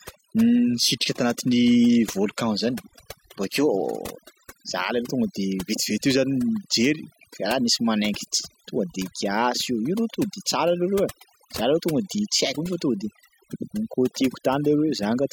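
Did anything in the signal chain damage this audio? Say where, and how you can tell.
Yes. Throughout the whole clip the background sinks to near silence, dotted with twinkling specks. That is overdone noise removal, introduced at the processing stage. A noise suppressor set far too aggressively pushes individual frequency bands down or shuts them off whenever their level comes close to its noise estimate. The quieter parts of the speech fall below that threshold and are removed along with the noise, leaving isolated bins that flicker on and off.

From 0.0 to 4.0 s the speech is dull. The treble is missing or sounds synthetic, and codec artefacts are stronger. At 4.0 s the quality jumps up with no gap, and nothing above 16.3 kHz is present. This is an adaptive stream starting at a low bitrate, a fault at the codec and network stage. The player began on a cheap rendition, which fits HE-AAC at 32 kbit/s, to start quickly. 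It then stepped up to a better one, consistent with AAC-LC at 96 kbit/s, once it had measured the connection.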